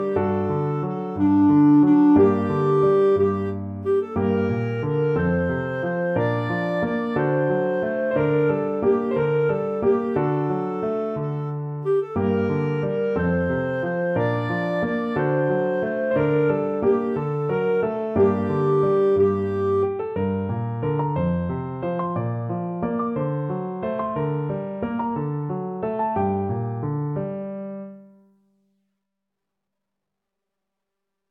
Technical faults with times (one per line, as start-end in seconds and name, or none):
none